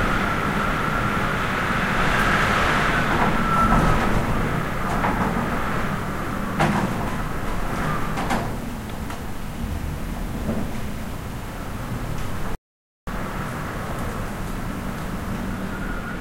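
An audio dropout to silence runs from 12.55 to 13.07 s, removing about 0.52 s of sound. The input was likely cut off while recording continued, writing silence, so the sound stops abruptly into total silence with no room tone, then resumes mid-flow.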